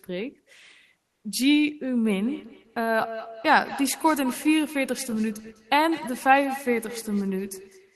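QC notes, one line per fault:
1.05–1.23 s, comfort noise in place of the background: for about 180 ms the room tone turns into a flat, featureless hiss, barely quieter, maybe about 1 dB down. The sender likely paused transmission during silence (Opus DTX), so the receiver filled in synthetic noise.
2.04 s to the end, feedback echo between two devices: every phrase comes back roughly a fifth of a second later, thin and ringy, peaking about 14 dB below the speech. A second device in the room is replaying the call into the microphone, and the canceller can't remove it.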